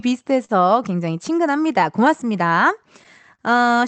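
All through the speech there are small, uneven timing hiccups: brief stutters where a sliver of sound seems doubled or held for an instant. This is clock drift between sender and receiver. The sending clock runs about 3 percent slow, so the receiver's jitter buffer keeps draining. To keep playback going, it repeats or stretches short pieces at irregular moments, and it can briefly run dry.

At 0.45 to 0.52 s, a sound hangs on too long with a faint buzzy smear. Nothing drops out, but the flow pauses for about 43 ms before resuming exactly where it left off. The same thing happens at 3.35 to 3.42 s, this time for about 39 ms. Both are a short stall from a late packet: the packet was not ready when due, the buffer emptied, and the receiver extended the last sound until the data arrived. Playback then ran that much later.

The audio carries the mild coding texture of an Opus call path, with nothing above 8 kHz.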